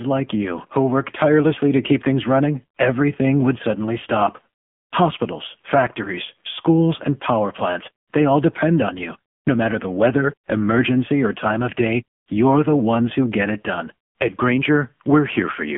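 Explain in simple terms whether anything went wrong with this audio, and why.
Something did go wrong, and it lasts the whole way through. The speech has been squeezed through an AMR narrowband mobile codec, the kind old 2G and 3G phones use. It keeps only a narrow phone band, roughly 150 Hz to 3.4 kHz, with nothing at all above about 3.6 kHz, so the voice sounds muffled and boxy. The codec also rebuilds the voice from a simplified model, and at this low quality setting that leaves it clearly buzzy and a bit synthetic.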